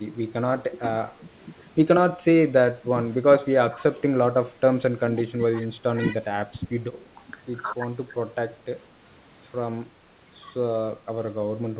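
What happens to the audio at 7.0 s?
Between 7.03 and 7.07 s the speech level dips briefly, by about 5 dB at its deepest, for roughly 40 ms before returning to its previous level. The likely cause is speech suppressed in double talk: with both sides active at once, the echo canceller's suppressor could not tell this talker's signal apart from the loudspeaker echo and pulled the gain down on both. It sounds like a quick, shallow duck in loudness.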